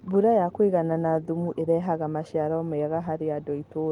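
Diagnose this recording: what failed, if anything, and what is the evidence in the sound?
No stage in the chain, from capture through conversion and transport to playback, leaves any audible evidence of a failure in this speech recording.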